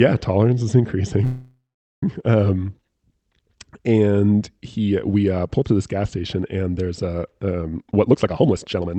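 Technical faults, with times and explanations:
1.24–2.03 s, call audio freeze: the speech stops moving forward and the last sound is held as a fading buzz that ends in about 420 ms of silence. The most likely cause is packets held up in transit until the jitter buffer ran empty. When audio resumes it continues from where it stopped, so about 780 ms has been inserted, nothing is lost, and everything after it is that much later.
7.71–8.99 s, jitter buffer speed-up: the speech runs at about 142% of normal rate with its pitch unchanged and sounds hurried to the end. The receiver is draining excess buffered audio by repeatedly cutting out short pitch-period pieces, roughly half a second in total. Over the Opus call path the band tops out near 8 kHz.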